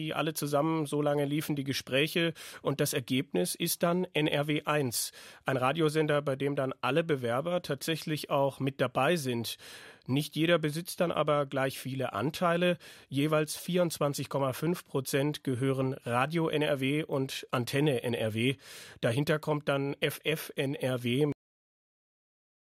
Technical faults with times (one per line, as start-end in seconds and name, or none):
21.32-22.74 cut-off end